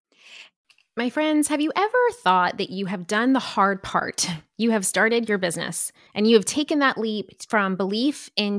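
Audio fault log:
Nothing stood out on listening to this speech recording.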